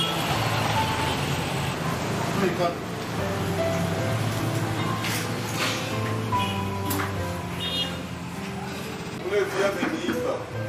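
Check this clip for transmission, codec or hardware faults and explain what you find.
One fault is audible, a short stutter near the end of the clip.

Repeated frames, 9.01 to 9.14 s: a 64 ms stretch of compressed audio plays twice more, consistent with a couple of frames being written or sent again. The decoder replays that fragment, producing a brief stutter and adding 128 ms to the running time.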